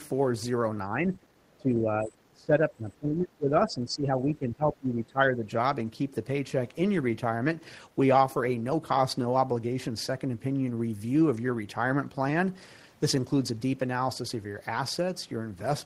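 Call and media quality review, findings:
Speech suppressed in double talk, 0.89–1.39 s and 1.57–5.5 s: echo canceller likely misjudged simultaneous talk as echo and attenuated the near end. Talker dips by roughly 15 dB, then by around 20 dB across most of the longer stretch.

Other side's voice leaking through, 1.49–1.57 s: residual far-end audio likely passed the echo canceller uncancelled. A brief, very faint scrap of the second voice, roughly 40 dB below the talker, sits between the two suppression spans.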